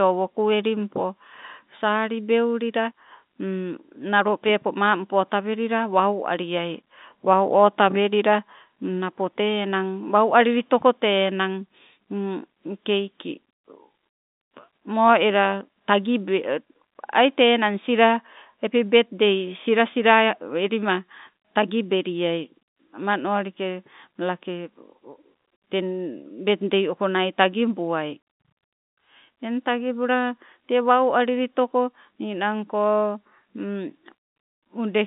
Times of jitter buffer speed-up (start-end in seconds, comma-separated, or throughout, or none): none